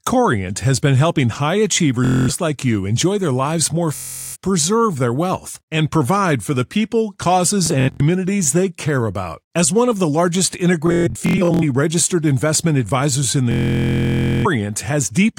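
Bluetooth stutter hits at 2.05–2.29, 3.95–4.36, 7.66–8.01, 10.87–11.63 and 13.52–14.46 s, first after "has been helping high". Packets arrived late or lost. The receiver replayed short slices, giving a machine-gun buzz. The last run lasts about 0.9 s.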